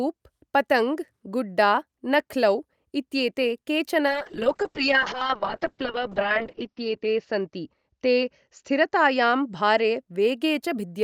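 A call bitrate drop runs from 4.07 s to 10.06 s. The connection's bandwidth estimate fell, so the encoder was pushed from 64 kbps down to 9 kbps, bottoming out there for about 2.3 seconds. At that rate the codec quantises much more coarsely and narrows the audio band from 20 kHz to 6 kHz, so the speech loses its brightness and turns muffled and rough, with a watery smear, until the bitrate climbs back.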